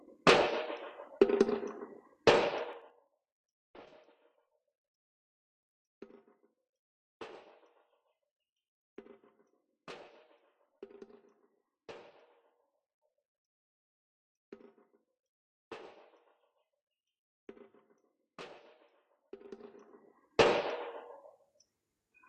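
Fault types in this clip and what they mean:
Zipper noise: A rapid ticking, like a zip being drawn, rides on the sound while its level moves. It happens from 2.65 to 3.16 s as the level drops by roughly 25 dB, and from 19.37 to 20.48 s as it climbs back by a similar amount. The gain jumps in unsmoothed steps of about 4 dB and then about 2 dB, around ten times a second, and each jump leaves a small click.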